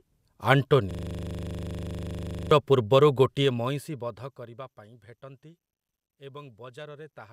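From 0.91 to 2.51 s the speech freezes into a system hang loop: a 40 ms slice repeats 40 times, giving a steady buzz at 25 Hz.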